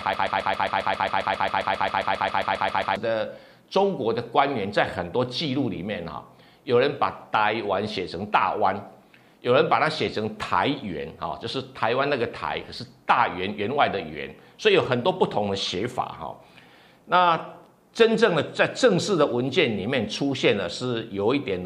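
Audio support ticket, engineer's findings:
Broken-record loop from 0.00 to 2.96 s, already under way when the audio begins. A 134 ms fragment repeats back to back about 21 times, identical each pass, producing a rapid stutter. Likely cause: stalled player, encoder or stream buffer re-sending its last held block instead of new data. Audio that belonged in those first 2.96 s is missing, not delayed.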